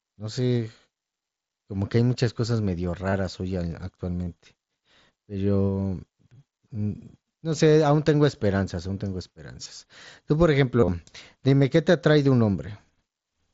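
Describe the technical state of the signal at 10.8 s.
Concealed Bluetooth headset packet loss, 10.80–10.88 s: lost packets are patched by repeating recent waveform, giving a brief buzzy full-level tone and warble rather than a silent dropout.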